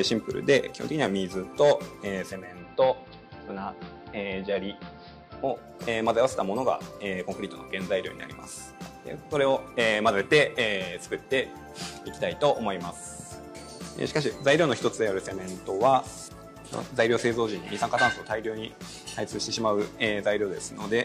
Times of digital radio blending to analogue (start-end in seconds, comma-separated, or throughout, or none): 2.27-5.81